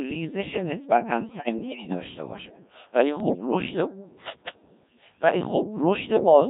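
Throughout the speech the Codec 2 vocoder is at work, and the heavy buzz and robotic tone fit its 1.3 kbit/s mode. The decoder rebuilds each frame from sine waves using only pitch, voicing, energy and envelope. On a spectrogram the harmonics look unnaturally regular and smeared, and the waveform no longer resembles the original.

From 1.21 to 2.00 s, and again from 3.20 to 3.51 s, bit errors on digital voice radio corrupt the frame parameters. Pitch lurches, loudness jumps and the timbre warbles into bleepy gibberish, worse in the first burst, which fits an error rate of around 7 percent against around 5 percent in the second. Spectrograms show harmonics jumping abruptly between frames, and the waveform shows blocky level steps.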